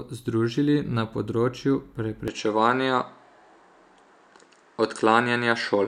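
At 2.28 s, right after "združili na področju", the speech turns duller and shifts in level by roughly 5 dB, with nothing above 9.3 kHz and a new faint noise floor well below the voice. This points to a likely input switched to a poorer device. A plain filter change would not bring that changed level and background.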